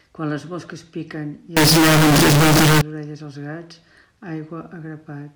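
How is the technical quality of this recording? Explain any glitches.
The recording has one serious fault, a short section of float read as integer. From 1.57 to 2.81 s the speech turns into a very loud, harsh, almost square-wave blast at an almost fixed, high level, with background noise pushed up to the level of the voice, though the pitch contour stays traceable. The likely cause is 32-bit float samples being interpreted as 32-bit integers, so each value comes mostly from its sign and exponent bits rather than its true amplitude.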